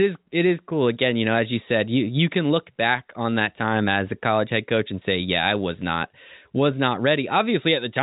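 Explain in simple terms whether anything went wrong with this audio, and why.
Nothing went wrong here; the call path worked normally.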